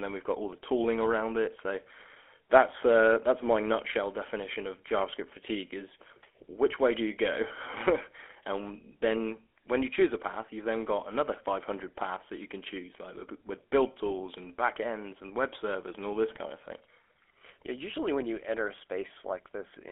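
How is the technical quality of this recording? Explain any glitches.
Quality is noticeably degraded for the entire length of the speech. It sounds buzzy and gravelly, with a coarse roughness on every voiced stretch, and it is thin and boxed-in because nothing survives below about 300 Hz or above about 3.4 kHz. That is the signature of the GSM full-rate codec, consistent with roughly 13 kbps. It rebuilds the voice from a vocal-tract model driven by a sparse, regularly spaced pulse excitation that keeps only a fraction of the detail, so the harshness is plainly audible throughout.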